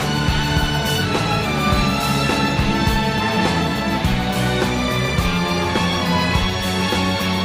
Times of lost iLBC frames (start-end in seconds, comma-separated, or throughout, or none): none